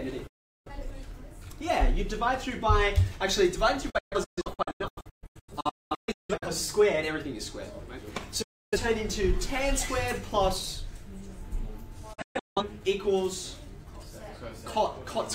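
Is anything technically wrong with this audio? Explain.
Yes. There is a digital broadcast dropout at 0.27 to 0.71 s, 3.90 to 6.47 s, 8.42 to 8.78 s and 12.13 to 12.62 s. The receiver lost valid frames and muted, fading out within 8 ms, until good frames returned. The sound vanishes into silence, and that content is gone. The second event is a cluster of short holes, the longest 0.21 s, and the fourth has holes up to 0.17 s.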